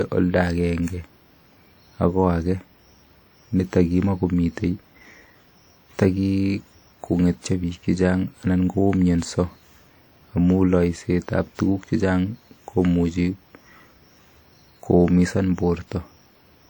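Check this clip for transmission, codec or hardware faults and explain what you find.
Throughout the speech there is a ringing, washy quality with hiss that swells and fades with the sound, likely WMA compression, where coarse quantisation across long transform blocks smears noise audibly.

Single sharp clicks at 4.12 s and 14.36 s are likely dropped samples: a couple of samples vanish, so the waveform jumps abruptly without removing any audible sound.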